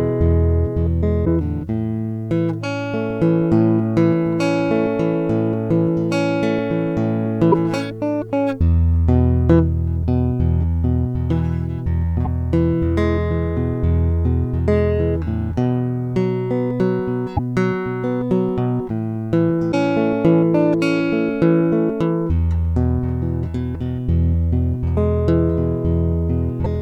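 At 1.24, 7.51, 12.24, 17.36, 19.71 and 26.63 s the music skips ahead with a brief chirp, noise burst or short hole of about 30 ms, likely a broken MP3 bit reservoir after missing frames. The waveform breaks there, with a span about one 26 ms frame long.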